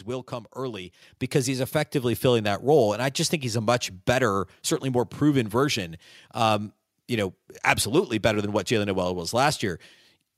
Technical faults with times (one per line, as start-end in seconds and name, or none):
1.02 microphone volume stepped up